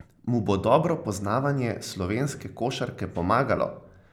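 Listening to this short speech recording, nothing technical stood out as wrong at any point.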